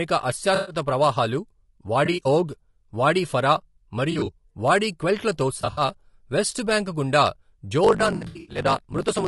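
Throughout, the speech sounds rough and grainy, with noise between the harmonics and a thin, synthetic top band. This is most likely low-delay AAC compression (AAC-ELD) at a low bitrate, around 32 kbps. Unlike a narrowband limit, the top band is still present, just artificial.

AAC frame loss with concealment smears short stretches into noisy, phasey patches. These come at 0.55–0.75 s (120 ms lost), at 2.05–2.26 s, at 4.11–4.29 s between "ఓగ్ వాడి ఫరా" and "వాడి క్వెల్ట్లతో", and at 5.61–5.81 s just before "వెస్ట్ బాంక్ గుండా". The gaps are filled with something rather than falling silent, which tells them apart from plain dropouts.

From 7.83 s to the end, after "వెస్ట్ బాంక్ గుండా", a block size mismatch (truncated) adds a 50 Hz buzz. The audio also runs 1.16 times fast at about normal pitch, which fits 1024-sample blocks losing their tails. A resampling error would raise the pitch instead.

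Within that stretch, 8.15–8.59 s suffers further frame-loss concealment, with 240 ms scattered across 400 ms.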